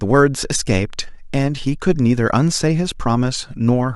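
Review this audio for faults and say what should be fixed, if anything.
Clock slip clicks tick faintly about every tenth of a second from 0.17 to 3.94 s, likely single samples slipping between two clocks roughly 300 ppm apart. Lock both devices to one shared clock, or resample at the handoff, and they'll go away.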